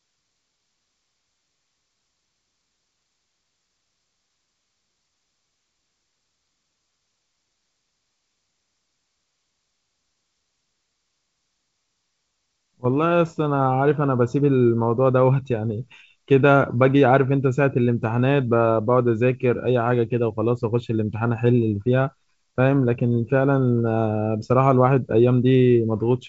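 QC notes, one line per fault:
No faults heard in this speech recording.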